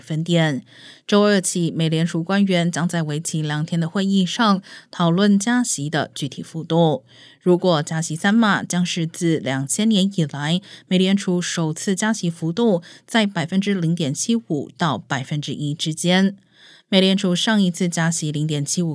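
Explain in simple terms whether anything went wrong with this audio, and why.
Nothing went wrong with this audio; there is no fault to explain.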